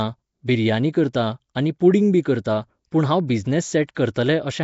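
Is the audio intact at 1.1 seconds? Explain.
No. At 1.13 s there is pre-echo. A brief hiss, about 12 ms long, arrives just before a sharp attack and blurs its onset. A transform codec spreads its quantisation noise across a whole block. Here the attack falls late in a block, so noise scaled to the loud part spills into the quiet moment just before it. The attack sounds softened and smeared rather than crisp.

This moment also carries the Nellymoser compression damage that runs through the whole clip. The speech has a rough, hissy halo and a smeared, underwater quality. The cause is likely Nellymoser Asao coding. That codec fixes the bit budget for each block, so weak bands get no bits and are filled with noise instead. The amount of damage fits a rate of around 32 kbps.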